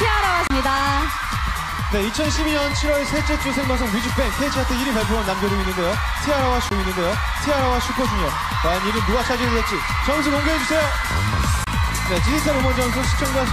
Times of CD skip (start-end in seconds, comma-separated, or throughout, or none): 0.47-0.50, 6.69, 11.64-11.67